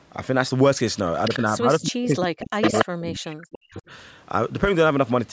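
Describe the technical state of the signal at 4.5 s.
At 4.5 s the speech signal is intact, with no fault present; it has simply passed through ordinary call microphone processing, which leaves nothing above 8 kHz and trims the lowest bass as expected.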